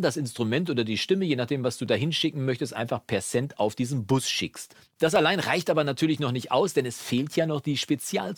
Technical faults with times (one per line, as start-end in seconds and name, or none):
5.16 dropped samples